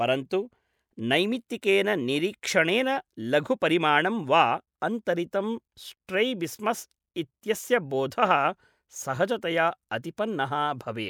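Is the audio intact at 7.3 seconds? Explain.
Yes, the speech at 7.3 seconds is intact, with no dropout, glitch, distortion or other fault at that moment.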